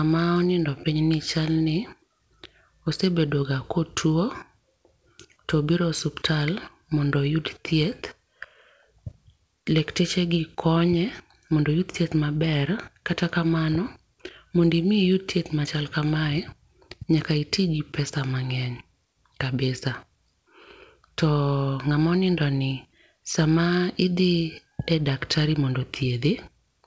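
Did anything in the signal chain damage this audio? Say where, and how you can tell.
No, nothing in this speech stood out as damaged on listening; the call path sounds like a wideband G.722 link at 64 kbps, with the band stopping at 8 kHz as that codec does.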